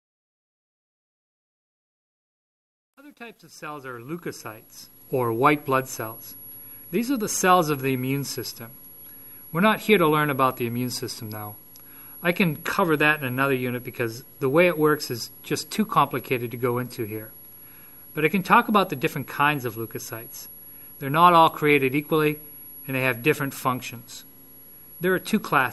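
Right from the start, the fade-in runs up to about 5.15 s, and it's got truncation distortion on the fade. The gain stage is only keeping around 10 bits with no dither, so the low-level waveform gets chopped into coarse square steps. The worst of it sits between 0 and 4.12 s. You hear it as a gritty texture before the level climbs high enough to smooth out.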